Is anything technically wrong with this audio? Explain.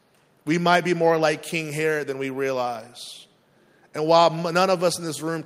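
No, nothing technically wrong can be heard here.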